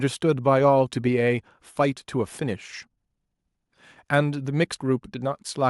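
Nothing technical stands out in this short speech recording; there's no fault to point to anywhere in it.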